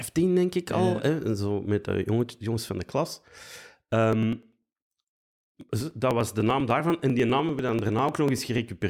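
Speech with periodic USB or driver dropouts from 4.13 s to 8.78 s. Every 0.099 s, about a millisecond of audio is skipped, giving evenly spaced ticks while sound is present. A spectrogram shows thin, regularly spaced vertical broadband lines, and the waveform shows small splice discontinuities.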